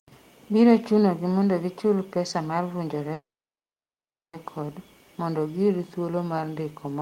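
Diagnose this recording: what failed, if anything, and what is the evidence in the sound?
A call audio freeze sits at the network and jitter-buffer stage. At 3.13 s the sound stalls, and the held sound fades into about 1.1 s of silence before the audio resumes at 4.36 s. The speech picks up exactly where it broke off, so nothing is lost. Instead about 1.2 s of gap is inserted and everything after it runs that much later. Packets were likely held up in transit, letting the receiver's buffer run dry. Packet loss would instead drop audio outright.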